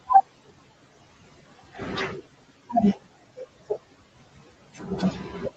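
From the start there are noise suppressor artifacts: the background gets pushed down by about 15 dB between phrases and rises back under the speech. Near the end the suppressor starts swallowing speech it takes for noise, first at 4.74 to 4.88 s with a dip of about 10 dB, then at 5.12 to 5.42 s, about 7 dB down, leaving those bits faint and clipped.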